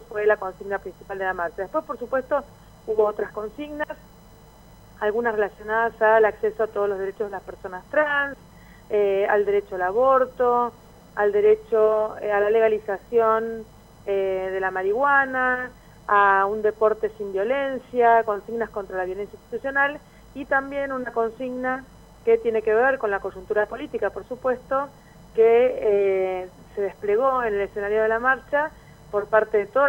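No faults can be heard anywhere in this recording.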